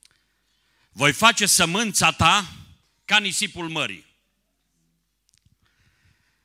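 Two devices likely running on separate clocks, a few hundred parts per million apart, let the buffer between them drift until a small block of samples is dropped or repeated. These clock drift buffer slips sound like regular clicks in the speech, about every 0.97 s from 0.78 s to 5.63 s.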